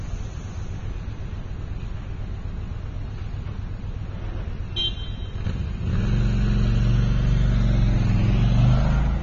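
Throughout the recording the everyday sound carries plainly audible damage from lossy coding, most likely AAC compression at a low rate, in the region of 24 kbps. The encoder discards detail it judges inaudible and lowers its bandwidth, so the audio sounds dull and smeared, with a fizzy, warbling texture on sustained and hissy parts. A spectrogram would show a hard ceiling well below the usual top end, and patchy holes and blotches across the upper bands.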